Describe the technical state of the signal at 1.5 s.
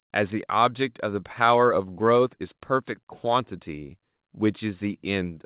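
At 1.5 s the speech is intact, with no fault present, only the narrowband sound of the G.711 mu-law call path, which leaves nothing above 4 kHz.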